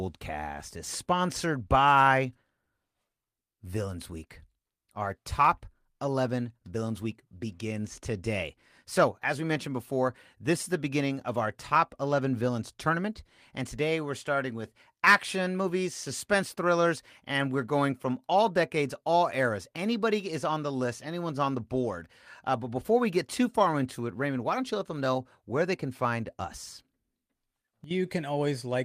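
A speech recording with no audible technical faults.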